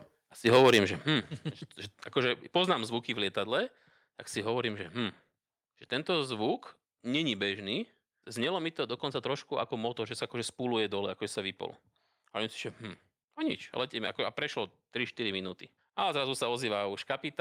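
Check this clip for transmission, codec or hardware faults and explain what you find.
Two kinds of fault appear, both at the input end: a distorted peak early in the speech, then two sudden drops in level.

From 0.46 to 0.8 s the loudest syllables turn harsh and crackly, with their tops flattened. This is likely microphone overload: the signal ran about 6 dB past the converter's ceiling, so a small share of the waveform was sliced off flat. Codec distortion smears across the spectrum and comes and goes with bitrate. This crackle tracks loudness and affects only the peaks.

At 1.02 s the voice and the background drop together by about 8 dB, and at 2.73 s they drop again by about 3 dB. These are likely microphone volume step-downs: the call software reacted to the overload by cutting the device's input gain in discrete jumps. Because the floor and the voice fall together in an instant, this is not a fade or noise suppression, which would be gradual or would touch only the background.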